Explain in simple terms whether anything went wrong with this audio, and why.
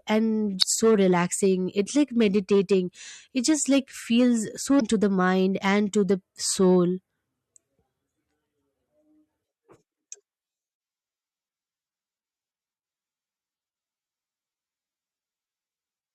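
Damaged data in a compressed stream causes two brief glitches, at 0.59 to 0.64 s and 4.77 to 4.82 s. Part of the compressed speech file was corrupted there, so the decoder misread those bits, lost its place, and searched for where clean data resumed.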